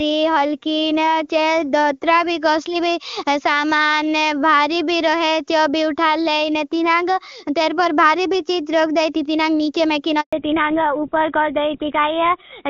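Speech carried over a mobile call, clear and wideband up to about 10.2 s. Then a handover gap runs from 10.21 to 10.33 s: the sound dies within a few tens of milliseconds into 120 ms of clean silence while the call switches networks. Unlike packet-loss concealment, nothing is smeared or repeated over the hole. Right after it, at 10.33 s, a fallback to narrowband sets in and lasts to the end. Nothing remains above 4 kHz, and the voice turns dull and rough, which points to an older full-rate codec. A plain low-pass filter would not explain this, because the change begins exactly at the gap and adds codec roughness.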